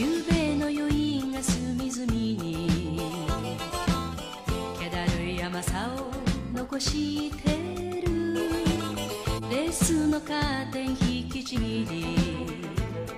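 At 9.34 to 9.44 s and again at 11.52 to 11.57 s, compressed frames are skipped: the decoder loses or rejects whole frames, so the audio jumps ahead by about 50 ms each time.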